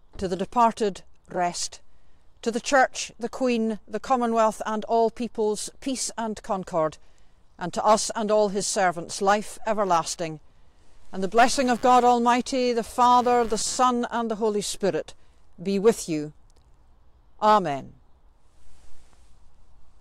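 From 11.52 s to 13.77 s a buzzing, chirping layer sits under the sound: computer activity noise. A change in load on the processor, graphics card or mouse shifts the ground that the audio circuit shares with the computer, and that fluctuation enters the signal path. Here it pulses at around 100 times per second and sits roughly 25 dB below the main signal. It tracks the machine's activity rather than the sound, stopping as abruptly as it began.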